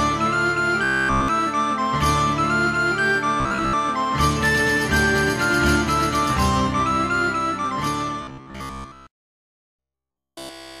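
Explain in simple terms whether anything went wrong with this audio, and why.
Three stretches turn into a stiff, metallic buzz near 67 Hz: 0.83 to 1.28 s, 3.40 to 3.73 s, and 8.23 s to the end. This robotic sound from repeated short buffers likely comes from audio arriving too slowly, so about 15 ms chunks get replayed in place of most or all of the real sound.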